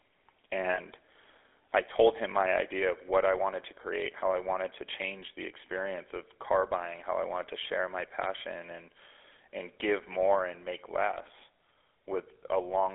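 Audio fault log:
Throughout: GSM full-rate codec. The speech has the familiar buzzy, gravelly roughness of the old 13 kbps GSM coder, and it's plainly audible. That codec models the vocal tract as a filter and feeds it a sparse train of regularly spaced pulses, keeping only a third of the excitation, so the fine texture of the voice is rebuilt rather than carried. The band sits roughly between 300 Hz and 3.5 kHz, which gives it that narrow phone-line quality with nothing airy on top.
0.74 to 0.79 s: lost GSM frames. For about 40 ms the sound freezes into a short rough, metallic ring instead of moving on. Two frames went missing there, going by the length, and the decoder covered the gap by reusing the settings of the last good frame. It's brief enough that the sound never fades to silence. It just snags for a moment before the speech carries on.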